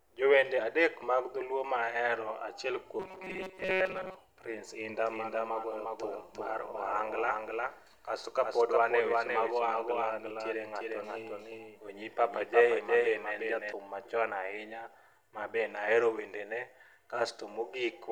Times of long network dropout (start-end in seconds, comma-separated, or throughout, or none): none